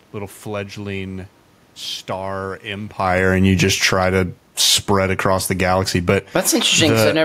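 Speech clip with automatic gain falling: from 2.98 s the gain control decides the input's too hot or its background noise too strong and eases down until 7.08 s, ending about 16 dB quieter. The room noise sinks right along with the voice, and the talker shifts position around 3 s.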